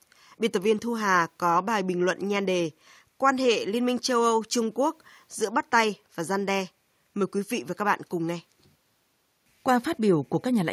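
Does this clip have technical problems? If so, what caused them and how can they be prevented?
No, this clip has no technical problems, so there is nothing to prevent.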